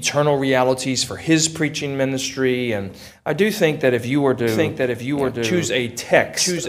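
From 4.47 s to the end there's a doubled audio track: a second copy, about 5 dB down, trails a second behind, likely from a slower capture path.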